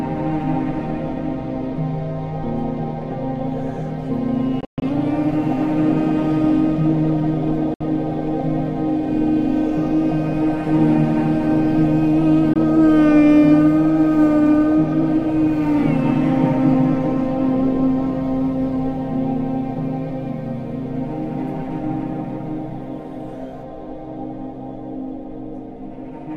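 Bluetooth dropouts cut the sound three times, at 4.61 to 4.82 s, 7.74 to 7.81 s and 12.53 to 12.56 s. The first is broken up, with about 171 ms missing across 213 ms and the longest hole 128 ms. The others are single gaps of 64 ms and 21 ms. Each gap is silence, and the sound comes back further along, as if it had kept playing. The likely cause is audio packets reaching the headphones too late and being discarded.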